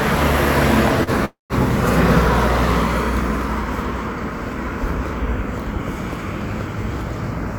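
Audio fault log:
1.03–1.10 s, short stall from a late packet: the sound is held for about 36 ms, then resumes where it left off. Nothing is lost, and everything after plays 36 ms later. It is too brief to fade into silence, which separates it from a freeze.
1.25–1.53 s, call audio freeze: the last sound is extended and fades for roughly 100 ms, then 150 ms of silence, 248 ms in all, before the audio resumes from the same point with nothing missing. The likely cause is packets delayed until the jitter buffer emptied. Its length and silent tail distinguish it from a short stall.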